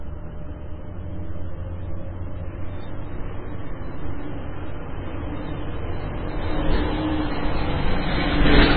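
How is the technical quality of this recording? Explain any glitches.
Poor, because heavy lossy-coding damage runs through the whole clip. Throughout, the treble stops abruptly at about 4.5 kHz, so the sound is dull and boxy, and what remains has a watery, swirling texture with chirpy, metallic edges on bright content and smeared attacks. The likely cause is MP3 compression at a very low bitrate, consistent with something near 16 kbps. Starved of bits, the encoder discards everything above the cutoff and zeroes weaker spectral lines, which flicker on and off between frames and produce the swirl.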